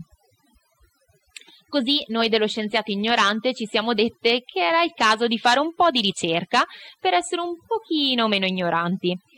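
From start to finish there's overdone noise removal: the reducer was pushed too hard, so the background drops to near silence with twinkly specks, and quiet parts of the speech go with it.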